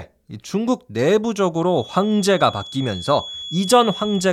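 From 1.60 s to the end of the clip, a thin, steady tone at 3.4 kHz sits under the speech, roughly 15 dB below it and swelling and fading slowly in level. This is a feedback whistle, most likely from the loudspeaker-to-microphone loop resting just at the edge of instability. At that point one frequency keeps recirculating and sustaining itself without building into a full howl.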